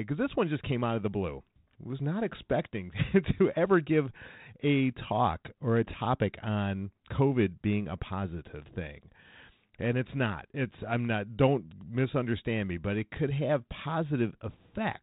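No technical faults occur anywhere in this speech recording.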